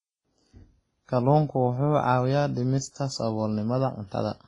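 Speech that sounds dull throughout, with nothing above 10.5 kHz and two layers of codec artefacts, likely from transcoding between lossy codecs, a low-rate WMA encode re-encoded to Opus.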